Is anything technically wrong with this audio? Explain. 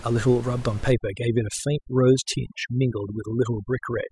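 Yes. From 0.92 s to the end, the background drops and breaks up into twinkling specks: overdone noise removal, pulling bands near the noise estimate down hard. The room noise it targets sat about 18 dB below the speech.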